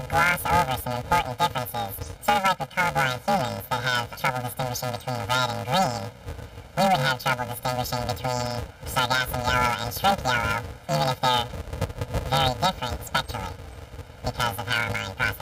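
From start to finish the audio carries a steady robotic buzz near 375 Hz, the signature of planar audio read as interleaved. Each short block holding all left samples, then all right, is played as alternating pairs, so every 2.67 ms block runs twice at double speed, left then right. The rate fits blocks of about 128 samples. Because the blocks are so short, there is no clear octave jump, which separates this from a sample-rate mismatch that would raise the pitch and shorten the clip.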